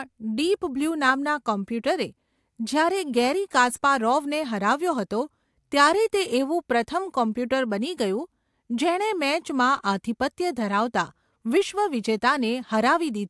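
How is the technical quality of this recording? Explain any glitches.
The recording has no audible technical faults, and the speech signal stays continuous and stable throughout, with no glitches to explain.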